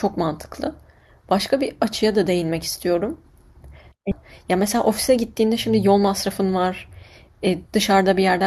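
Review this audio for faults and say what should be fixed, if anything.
Around 4.11 s there's a skip ahead: about a second of speech just vanishes, and the two sides butt together with no gap. The receiver dropped a backlog of audio to catch up, cutting latency by roughly that second. A jitter buffer that discards gradually or has a higher overflow limit would avoid that jump.

Then from 4.46 to 6.28 s you get a jitter buffer speed-up. The talker runs about 4% fast at the same pitch, because the buffer was still over its target and kept trimming tiny pitch-period slices, about a tenth of a second in total. Spreading that trimming over a longer stretch would make it far less noticeable.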